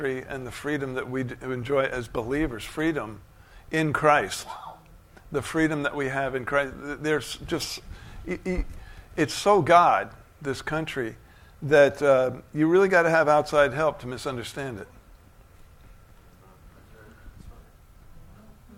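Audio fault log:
No faults are heard anywhere in this clip. There are no dropouts, clicks, level jumps or timing breaks to point to at any moment.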